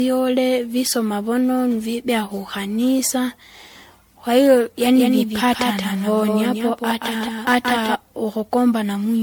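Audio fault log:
Throughout: generation loss. The speech sounds swirly, smeared and hollow, and consonant onsets blur, more than a single MP3 pass at 96 kbit/s would cause. This likely comes from about ten successive re-encodings, each on a shifted frame grid, so the artefacts pile up rather than staying a fixed codec signature.
4.81–7.95 s: doubled audio track. A second full-band copy of the speech runs about 200 ms behind, roughly 5 dB quieter. It has no decay or room colour, unlike reverb or an echo, and it starts and stops abruptly. It likely comes from a slower capture path mixed back in.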